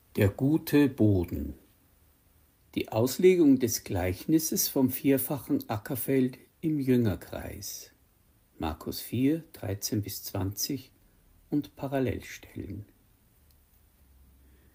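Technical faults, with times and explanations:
No technical faults detected.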